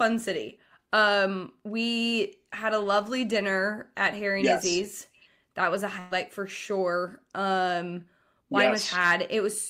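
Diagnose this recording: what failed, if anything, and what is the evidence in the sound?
At 5.99 s the speech stops moving and the last sound is held and fades until about 6.13 s, then resumes further on. This is a burst of packet loss at the network stage: roughly 120 ms of audio never arrived, and the receiver concealed the gap by extending and attenuating the last sound.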